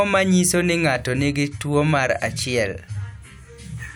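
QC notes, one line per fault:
No fault found in this speech clip.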